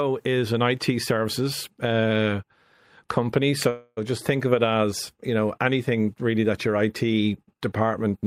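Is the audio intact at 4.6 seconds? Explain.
Yes, the audio is intact at 4.6 seconds, with no dropout, click, distortion or other fault at that point.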